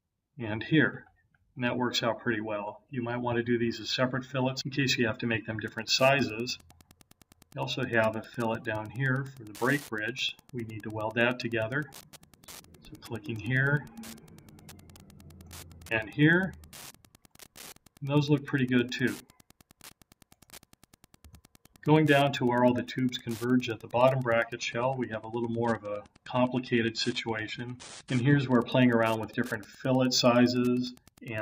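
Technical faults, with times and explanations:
5.64–31.4 s: Wi-Fi interference. A steady ticking starts at 5.64 s and runs to the end. The ticks repeat every 102.4 ms, just under ten per second. That is the timing of a Wi-Fi beacon. A radio close to the audio circuit is transmitting, and the circuit rectifies its bursts into audible clicks. The ticking sits well below the main sound.
24.55–28.55 s: Adaptive stream at a lower bitrate. At 24.55 s the treble suddenly thins. Nothing remains above 9.7 kHz. Full quality returns at 28.55 s. Neither change leaves a gap. The connection slowed, so the player switched to a cheaper version of the stream for four seconds. The loss of top end fits a fall from 96 to 32 kbit/s AAC-LC. The encoder discards high frequencies to fit the smaller budget.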